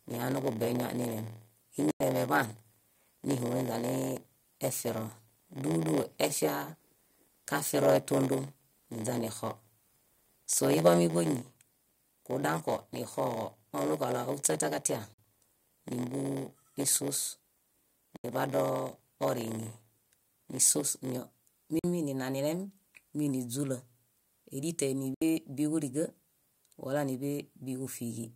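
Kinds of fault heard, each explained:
block size mismatch (padded): One stage writes shorter blocks than the next reads, which fits a 512-sample read, and zeros fill the remainder. From the start to 21.2 s this puts a buzz at 86.1 Hz over the speech and slows it to 0.938 times normal speed, with pitch about unchanged.
Bluetooth dropout: The output falls silent at 1.91, 15.14, 18.17, 21.79 and 25.14 s, for 93, 46, 70, 46 and 70 ms, and resumes as if it had played on. Packets likely missed their delivery time to the headphones and were dropped, two to four at a time.
microphone volume stepped down: At 11.07 s the speech and background drop together in a single step of about 3 dB and stay there. The likely cause is call software judging the microphone too loud and lowering the device's input volume in one move.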